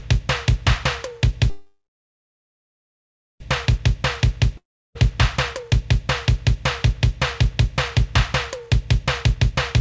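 From 1.50 to 3.41 s there is a call audio freeze. The sound smears into a brief fading buzz, then about 1.6 s of silence, and resumes exactly where it stopped. The likely cause is delayed packets draining the jitter buffer, inserting a 1.9 s gap. On a waveform it appears as a flat stretch, and on a spectrogram as a short blurred tail followed by an empty band.

A long network dropout runs from 4.57 to 4.96 s. A short decaying hiss gives way to roughly 0.34 s of silence, and when the sound returns, about 0.72 s of it is missing. The waveform shows a jump in content across a flat gap, and the spectrogram shows an abrupt discontinuity.

Jitter buffer speed-ups occur at 5.53 to 5.81 s (112%, about 40 ms trimmed) and 9.05 to 9.81 s (111%, about 100 ms trimmed). Tiny pitch-period slices are cut repeatedly, so events sound hurried without any pitch shift. On a spectrogram, features appear slightly compressed in time, all beneath the codec's 8 kHz ceiling, which fits G.722.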